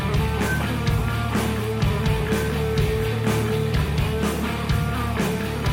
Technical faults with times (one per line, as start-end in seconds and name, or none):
4.65-4.71 loose connector crackle